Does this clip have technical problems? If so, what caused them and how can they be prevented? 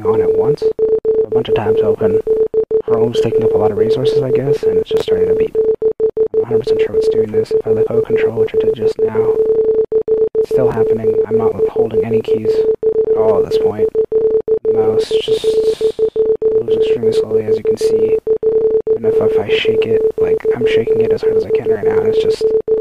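Yes. Chunks out of order occur at 4.97 to 5.02 s and at 10.72 to 10.74 s. Each chunk is about 11.6 ms long. In the first event a chunk plays three chunks late, and in the second one chunk late. Nothing is lost, but each misplaced chunk creates three hard joins, heard as a brief jumbled stutter. Preventing it requires sequence-numbering buffers and reordering them in a jitter buffer before playback or writing.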